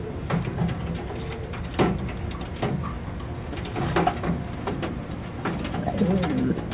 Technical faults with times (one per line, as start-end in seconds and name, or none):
none